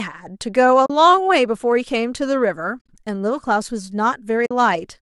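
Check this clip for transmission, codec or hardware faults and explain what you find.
There are three short dropouts, all from AAC frame loss with muting, at 0.86 to 0.90 s, 2.79 to 2.88 s, and 4.46 to 4.51 s. The decoder zeroes the missing frames, and the overlapping windows fade each gap in and out, so you hear soft-edged holes. The middle one is choppier: about 80 ms is lost across a 100 ms stretch, with the longest run around 50 ms. The gap sizes fit the roughly 10 ms frames of low-delay AAC, likely AAC-ELD.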